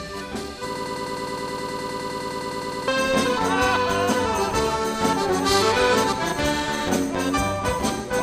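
From 0.76 to 2.88 s, a fragment about 103 ms long repeats exactly, back to back, 21 times, making a stuttering broken-record loop. The player, encoder or stream likely stalled and kept resending its last fragment, so the audio for that span is lost.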